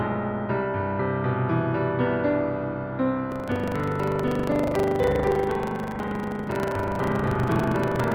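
The program filling the playback ring buffer and the hardware draining it have drifted out of step, so from 3.28 s to the end of the clip the two cross inside every period, causing buffer tearing. A small slice of each buffer, roughly a sixth, still holds audio from about a tenth of a second earlier, spliced in with hard joins on both sides. The sound takes on a steady robotic rattle at 25 Hz, one tear every 40 ms, present wherever signal is.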